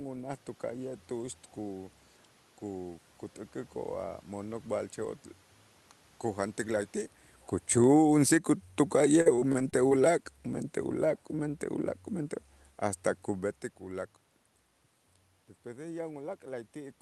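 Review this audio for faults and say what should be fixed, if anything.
Automatic gain falling, 6.61 to 10.22 s: the gain control judged the input too loud and gradually lowered its gain by about 5 dB. The speech and its room background sink together over those seconds, a drop that also overlaps the talker shifting position near 7 s. To prevent it, give the gain control a gentler, slower reduction or cap how far it can pull down.

Repeated packet loss (robotic sound), 9.21 to 9.98 s: packets kept going missing or arriving late. Each hole was patched by extending the last sound, with the longest gap 42 ms, so roughly a quarter of that stretch is concealment. The speech turns choppy and robotic, with pieces missing. To prevent it, stabilise the network path and enable forward error correction with a somewhat deeper jitter buffer.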